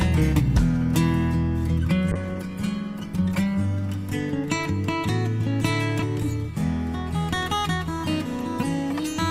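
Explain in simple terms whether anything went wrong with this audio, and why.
Something did go wrong: a call bitrate drop between 2.13 and 4.73 seconds. The connection judged that it had less room to send data, so the encoder was told to squeeze the sound into far fewer bits. With less detail to work with, it coded the audio more coarsely and trimmed off the brighter, higher parts. The sound turns rough and dull, worst for about a second, then clears as the data rate recovers.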